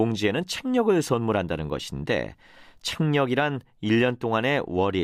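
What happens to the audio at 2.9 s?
Nothing goes wrong at 2.9 s; the speech carries on intact through that moment.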